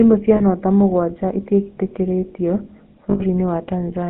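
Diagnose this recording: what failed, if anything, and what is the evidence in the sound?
The codec stage failed first: the whole recording carries the GSM full-rate codec's buzzy, gravelly texture, plainly audible throughout, inside a line band of roughly 150 Hz to 3.5 kHz. The coder rebuilds the vocal tract from a filter driven by a sparse, regularly spaced pulse train, which fits 13 kbit/s full rate. That steady rasp on every voiced sound separates it from the swirly, watery artefacts of a modern low-bitrate codec or the hiss of a noisy analogue line.

The network stage then dropped data, causing lost GSM frames at 0.36 to 0.42 s (40 ms) and 3.10 to 3.22 s (100 ms). At each point the decoder reused the last good frame's parameters, so the sound holds as a short metallic ring instead of breaking into silence. The lengths fit two and five 20 ms frames. A buffer dropout would cut to a click or a gap, not a frozen tone like this.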